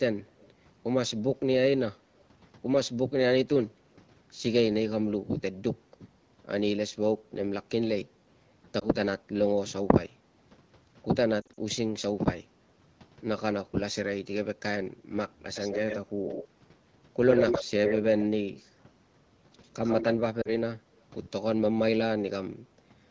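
Speech, marked by an echo leak: a delayed copy of the talker returns, likely from a far-end loudspeaker whose echo canceller let some through. Two faint instances at 0.41–0.51 s and 2.18–2.24 s trail by 143 ms at about −30 and −40 dB. Stronger ones at 15.54–15.99, 16.25–16.44, 17.29–17.65, 17.85–18.02 and 19.63–20.15 s trail by 94 ms at about −10 to 0 dB. The fixed lag separates it from room reverberation. Lost AMR speech frames appear where the decoder stretched the last good sound and faded it. At 8.79 s about 20 ms goes missing, fitting one frame, and gives a brief dip or warble. At 11.41–11.59 s roughly 100 ms is lost across a 160 ms span in runs up to 40 ms, leaving the voice weak or rough for a moment. At 20.41–20.50 s a 40 ms gap drops toward near silence. This smooth fade-and-recover differs from the hard clicks of dropped packets.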